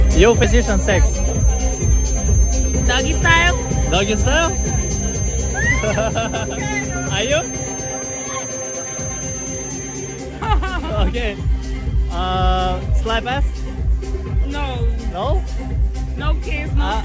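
From the very start until 10.28 s a thin, steady whistle at 6.3 kHz sits behind the sound, about 10 dB below it, wavering slightly in level but never growing. This is a feedback whistle, most likely from a loudspeaker-to-microphone loop held just at the edge of feedback, so that a single high frequency keeps ringing without building into a howl. Because the sound only extends up to 8 kHz, the tone sits fairly near the top of the band.

At 0.44 s the audio jumps abruptly forward with no pause to cover the join. This is a skip ahead. Roughly 0.4 s of material is simply missing, and the audio on either side of the cut is butted directly together. The stretch was discarded while later audio was already queued, as happens when a jitter buffer overflows and drops its backlog to bring the delay down. The sudden splice makes the continuity break audibly.

From 1.08 s to 2.74 s the sound runs slightly fast, at about 105% speed with its pitch unchanged, giving it a faintly hurried feel. 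This is a jitter buffer speed-up. The receiver was holding more audio than it wanted and trimmed it back by cutting out many tiny pieces, each one or a few pitch periods long, removing about 70 ms in total across the passage.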